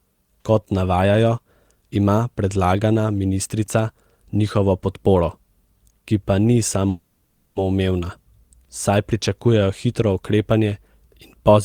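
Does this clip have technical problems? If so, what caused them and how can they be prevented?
Yes. Packets were likely delayed in transit and the jitter buffer ran dry, causing a call audio freeze from 6.89 to 7.58 s, just after "ki pa ni." The last sound is drawn out as a fading buzz or hiss for 0.67 s. The speech then resumes where it stopped, losing nothing but running that much later. An adaptive jitter buffer with more headroom, on a network path that prioritises voice traffic, would prevent this.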